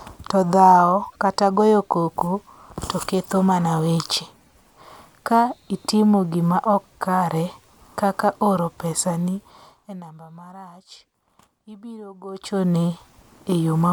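Nothing in this bit of speech points to a technical fault, so there's nothing to flag here.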